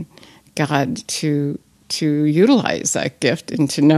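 From 1.33 s to 3.05 s, one channel runs late by roughly a single sample, a few hundredths of a millisecond, and the two are summed to mono. This channel delay causes comb filtering: content common to both sides cancels where the offset equals half a period, which puts the first notch near 20 kHz. With the notch that high, the speech loses its top edge and sounds dull and softened in air for that stretch.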